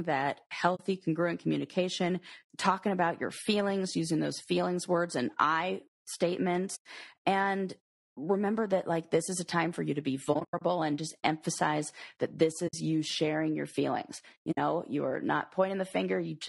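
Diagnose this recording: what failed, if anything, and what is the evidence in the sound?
Low-delay AAC compression runs through the whole speech clip, at the codec stage. The voice sounds rough and grainy, with noise filling the gaps between harmonics and a thin, synthetic-sounding top band. This is likely AAC-ELD, the low-delay AAC variant used for calls. At a low rate its frequency lines are coarsely quantized, so quantization noise fills in between the harmonics. The plainly audible damage fits a low rate of around 32 kbps.

AAC frame loss with muting, a network-stage fault, leaves soft-edged holes at 0.75–0.80 s (40 ms, just before "congruent communication talking about"), 6.75–6.86 s (100 ms), 10.33–10.62 s (180 ms of gaps over 280 ms, the longest about 100 ms, between "for you to be" and "and just emphasize that"), 12.67–12.75 s (60 ms, between "just emphasize that this" and "you sharing your feelings"), and 14.51–14.58 s (60 ms). 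The lengths fit whole 20 ms frames that the decoder zeroed. The overlapping windows fade the sound out and back in around each gap.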